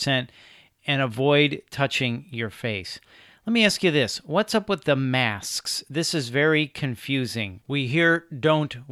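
Nothing technically wrong turns up anywhere in this speech recording, so there are no times or causes to point to.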